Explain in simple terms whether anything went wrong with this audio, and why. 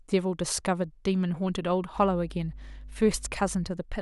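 From 1.93 to 3.72 s a steady, fairly loud low drone sits under the speech. This is mains hum: electricity from the power supply leaking into the recording at 50 Hz. Unlike wind or handling rumble, it holds one unchanging pitch, then stops abruptly.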